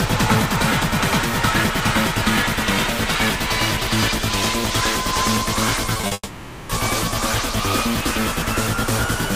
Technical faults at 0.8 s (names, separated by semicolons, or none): none